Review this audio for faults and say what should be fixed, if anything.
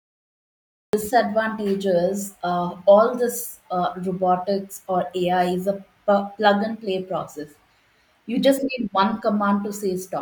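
Cut-off start: digital silence until 0.93 s, then speech enters mid-sound with no attack, unlike a fade-in, because capture began late. Start recording before the speaker begins.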